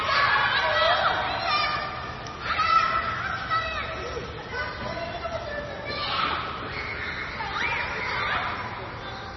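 All the way through, nothing comes through above about 5.9 kHz, and the sound turns watery and swirly, with smeared attacks. That's heavy damage, likely from MP3 compression starved of bits, which fits a very low bitrate around 23 kbps, so weak detail flickers in and out.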